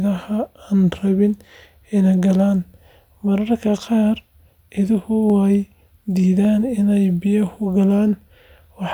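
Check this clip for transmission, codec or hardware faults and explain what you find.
There is one fault. Clock drift buffer slips, from 0.7 to 8.75 s: a regular click about every 1.15 s in the speech, likely from two mismatched device clocks forcing the buffer to drop or repeat a short block of samples each time.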